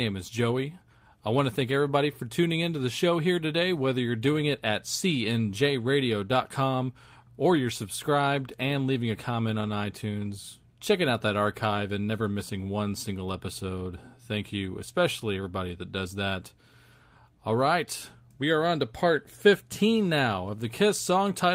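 No technical faults are audible.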